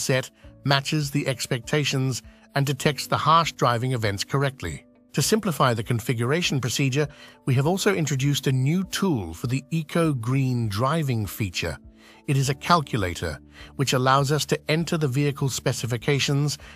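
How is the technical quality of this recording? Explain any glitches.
No glitches or technical faults can be heard here.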